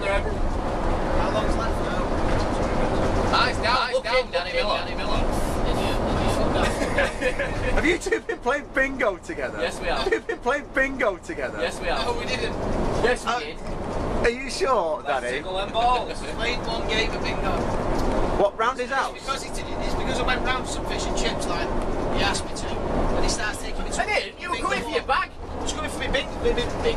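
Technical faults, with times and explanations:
3.23 to 7.93 s, doubled audio track: a second, full-band copy of the sound runs about 5 dB below the original and trails it by around 0.4 s. The copy carries no decay or room colouring, so it reads as a discrete repeat rather than an echo. It switches in abruptly at 3.23 s and cuts out just as abruptly at 7.93 s. This likely comes from a second capture path with more latency feeding the same mix.
10.05 to 12.05 s, stream segment repeated: the player jumps back and replays 2 s of audio that has already been heard, so the programme runs 2 s longer than it should. A small blip marks the jump back at 10.05 s. This happens when the same segment is fetched or queued twice and both copies are played out in sequence.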